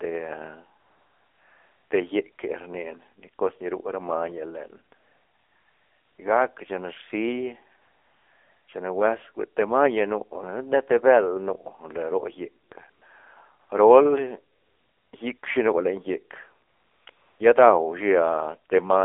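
Throughout, the speech sounds buzzy and synthetic, squeezed into a narrow band of roughly 300 Hz to 3.6 kHz with nothing above 4 kHz. This is the AMR narrowband mobile codec at 7.4 kbps, rebuilding each 20 ms frame from a vocal-tract model driven by a few pulses.

Eleven times between 0.80 s and 17.40 s, pauses turn into a steady, smooth hiss that switches abruptly in and out. These patches last from 40 ms to 1.22 s, with the longest starting at 0.80, 4.96 and 7.82 s. This is AMR comfort noise: speech frames stopped during these pauses, and the receiver filled them with synthetic noise built from a coarse estimate of the background's level and spectrum.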